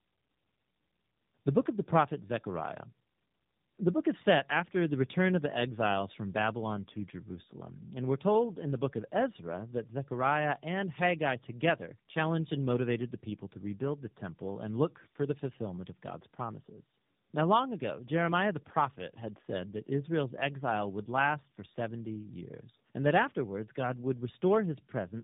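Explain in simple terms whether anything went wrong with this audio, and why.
Throughout the recording, the speech sounds rough, noisy, muffled and warbly, and nothing above about 3.7 kHz comes through, so it has the boxed-in quality of a phone line. The cause is tandem speech coding: the call seems to have crossed more than one phone network, and at each border the sound was unpacked and squeezed again. The sound points to two speech codecs in a row, each one degrading audio the previous one had already damaged.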